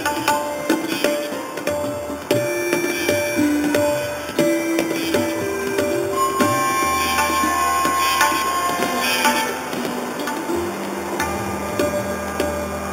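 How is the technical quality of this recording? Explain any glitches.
The technical quality is compromised by one fault present from start to finish. Imaging from sample-and-hold upsampling runs throughout. Each sample appears to have been simply repeated to reach 48 kHz, with no smoothing filter afterwards, which fits an original rate of 8 kHz. The missing filter leaves a mirrored copy of the spectrum folded upward, its lowest image filling 4 to 8 kHz at about 12 dB below the wanted sound. It is heard as a bright, metallic fizz that swells and fades with the audio, its lowest image moving opposite to the pitch.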